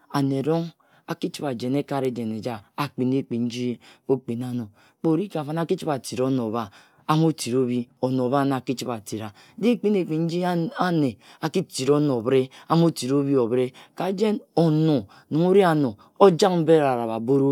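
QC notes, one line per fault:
No faults heard.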